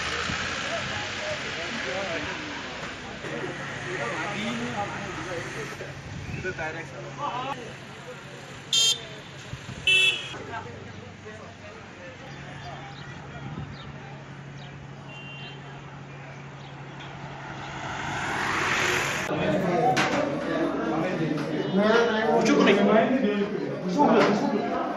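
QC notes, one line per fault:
5.73–5.76 s, stream segment skipped: the sound jumps forward abruptly, with a short blip across the join lasting about 26 ms, and the material on either side does not run on continuously. The likely cause is a stream segment that failed to load, after which playback resumed with the next one, so a stretch of the programme is missing. Unlike a dropout, there is no silent gap or muted hole; the timeline simply skips ahead.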